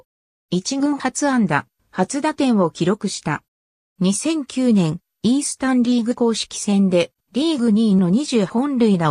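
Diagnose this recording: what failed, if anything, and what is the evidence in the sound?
Nothing failed; no stage shows a fault here.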